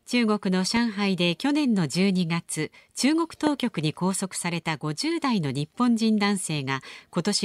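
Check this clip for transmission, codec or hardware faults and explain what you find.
Two loud pops sit on top of the speech. The first runs from 0.77 to 0.79 s, and the second from 3.47 to 3.49 s. Each is a single sharp click. The first rises a little above the speech. The second is much stronger, roughly 15 dB above it. The speech carries on underneath both. The likely cause is a brief voltage spike, from a plug, a switch, static or a driver glitch, that the following circuits turn into a short pulse.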